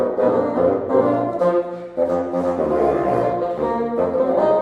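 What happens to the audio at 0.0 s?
Nothing goes wrong at 0.0 s; the audio starts cleanly and is intact at that moment.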